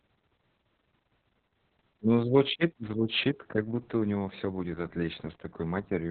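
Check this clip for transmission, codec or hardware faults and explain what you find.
One codec fault runs through the whole speech recording: Opus voice compression at a very low rate. Nothing is audible above about 4.3 kHz, which places the codec in narrowband mode using its SILK linear-prediction coder. The damage points to a bitrate around 6 kbps with long frames, possibly 60 ms. At that rate the excitation is quantised coarsely, so the voice sounds muffled and hoarse, with a slightly robotic, buzzy quality and blurred consonants.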